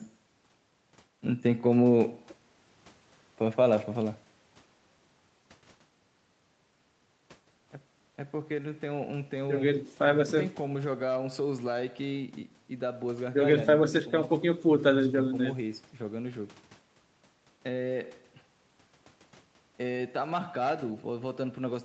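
No technical faults are present in this speech recording: its gradual level rises and falls, the call-style microphone processing, and the Opus call path all sound as expected for an ordinary call, with the audio band ending at about 8 kHz.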